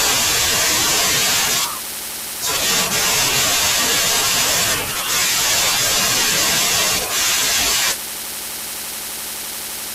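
Nothing technical stands out in this speech recording; there's no fault to point to anywhere in it.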